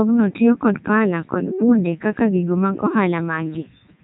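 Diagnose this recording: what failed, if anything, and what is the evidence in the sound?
The Codec 2 vocoder has processed the whole recording, a failure at the codec stage. The speech sounds robotic and buzzy from start to finish, and nothing is heard above 3.8 kHz. The damage is heavy, even at the codec's top 3.2 kbit/s mode. Codec 2 transmits only pitch, voicing, energy and a coarse spectral envelope. The decoder then rebuilds the speech from sine waves, so the original waveform is lost, leaving the mechanical, buzzy quality.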